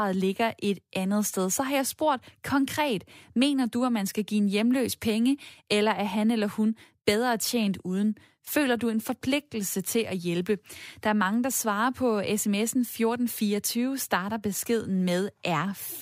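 No technical faults can be heard anywhere in the speech recording. There is nothing to place in time and nothing to describe as having gone wrong.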